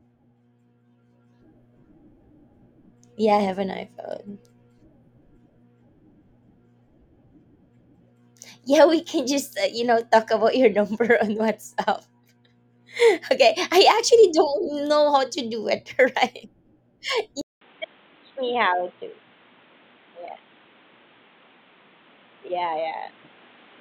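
Input switched to a poorer device at 17.41 s, running to the end of this speech recording. A 200 ms silence marks the changeover, after which everything above 4 kHz is gone, leaving the speech dull and boxy. A new background noise appears, roughly 30 dB below the speech, while loudness stays about the same. The likely cause is the system dropping to another microphone or a headset's narrowband call profile.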